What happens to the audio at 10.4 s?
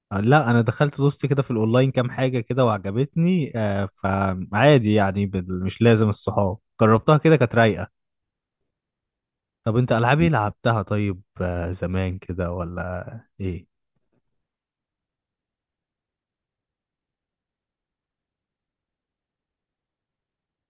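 Nothing goes wrong at 10.4 s; the speech carries on intact through that moment.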